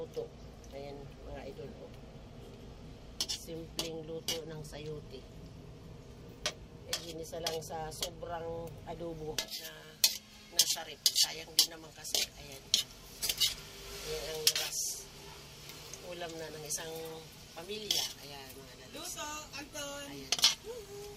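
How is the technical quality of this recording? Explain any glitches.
The recording has one clear fault. From 9.48 s to the end, pre-emphasis is left on: a J.17 treble boost was applied without its matching de-emphasis, lifting 10 kHz about 11 dB relative to 1 kHz. The sound turns thin, bright and hissy. Unlike ordinary sibilance or an EQ tweak, it switches on abruptly and follows a steady rising curve.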